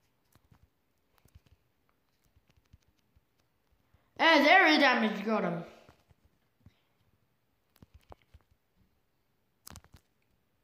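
Nothing is technically wrong with this audio clip.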